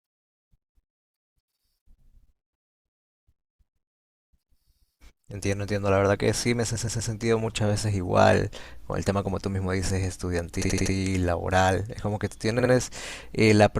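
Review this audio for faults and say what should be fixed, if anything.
The speech stutters three times. From 6.75 to 7.11 s, a 120 ms stretch plays three extra times. From 10.61 to 10.93 s, an 80 ms stretch repeats four extra times. From 12.59 to 12.72 s, a 60 ms stretch repeats twice more. These are repeated frames: runs of compressed frames were written or sent again, so the decoder replays them. The block lengths fit frames of about 20 ms, and the repeats add about 0.8 s in total. To prevent this, make the writer or transport check frame sequence numbers so that duplicate frames are dropped rather than decoded.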